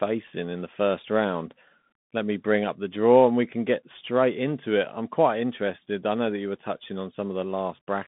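Throughout the speech, a Bluetooth CVSD headset codec, whose one-bit adaptive-step coding fits a 64 kbps link, confines the sound to about 150 Hz to 3.6 kHz, with nothing above 3.8 kHz. The plainly audible damage leaves muffled, scratchy consonants over a granular hiss.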